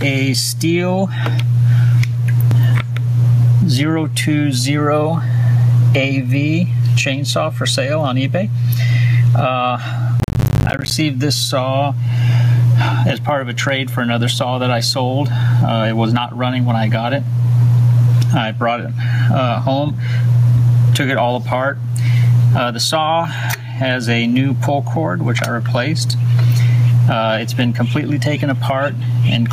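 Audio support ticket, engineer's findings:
Gain pumping, whole clip. Gain swing around 15 dB. Likely cause: input gain far too high, fast limiter/compressor clamping every peak. Dynamics squashed, loud and soft parts pulled close in level.

Processor overload crackle, 10.2 to 10.91 s. Burst of gritty crackle riding on the sound. Audio callback missing dozens of deadlines back to back, each leaving a brief silent gap with hard edges; spacing fits buffers of around 10 ms. Clears when the load drops.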